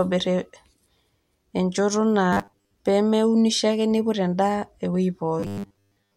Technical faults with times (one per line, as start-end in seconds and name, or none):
2.33-2.74 robotic sound from repeated short buffers
5.40-6.16 robotic sound from repeated short buffers